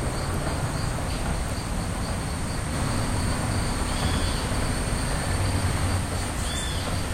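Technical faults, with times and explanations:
2.74–5.98 s, doubled audio track: a second, full-band copy of the sound runs about a tenth of a second behind the original at roughly the same level, giving a flammed, slapback doubling that appears and vanishes abruptly at those edges. Unlike an echo or room reverb, the copy never decays or takes on any room colour. The likely cause is the signal being captured a second time through a slower path, or an edit holding two offset copies.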